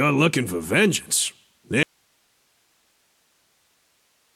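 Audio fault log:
1.83 s to end: audio dropout to a faint residue. The sound cuts off abruptly mid-flow and never returns, and what remains is only a low hiss, some 45 dB below the previous level. The step is instantaneous rather than a fade or a natural pause. The likely cause is the wanted signal being lost upstream while the rest of the chain stayed live, so only that chain's own noise floor continues through to the end.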